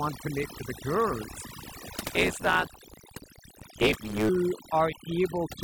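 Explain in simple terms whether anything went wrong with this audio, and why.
Two things went wrong in this speech clip.

The first is overdone noise removal, heard all the way through. A noise reduction tool was pushed too hard. It shut off any slice of the sound that looked like background hiss, and the softer parts of the voice were cut along with it. So the background drops and breaks up into small twinkling specks.

The second is a block size mismatch (truncated), from 1.96 to 4.29 s, starting right after "make to the gurus". One step in the chain handed over chunks of audio that were bigger than the next step took in. The leftover end of each chunk was dropped. That repeated chopping makes a steady buzz at about 109 Hz, which fits 512-sample blocks being written. Because pieces are missing, the speech runs about 1.16 times faster, yet the voice keeps its character.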